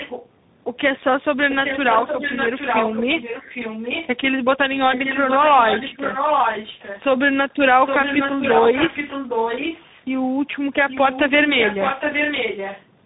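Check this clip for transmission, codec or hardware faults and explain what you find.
Two faults are present: tandem speech coding throughout the speech, and echo leak in three stretches.

Tandem speech coding runs through all of it. The speech seems to have been coded and decoded twice in a row, pointing to a low-rate coder of the G.729A kind followed by a CVSD-style delta-modulation stage. The second coder works on output the first has already damaged, so the roughness compounds. Speech sounds rough and warbly, with a hissy granularity, and nothing reaches past 3.8 kHz. A single narrowband codec would also stop near that point, but it would not have this layered grit on top.

Echo leak appears from 0.0 to 0.28 s, from 4.91 to 7.02 s, and from 7.84 to 10.06 s. It is likely a loudspeaker at the far end whose echo canceller let part of the microphone pickup through. A delayed copy of the speech trails the original by 0.815 s. 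That copy sits well below the speech at first, then comes back nearly as loud in the later two stretches. The long, fixed delay marks it as echo rather than room reverberation, which would smear the sound continuously instead of repeating it.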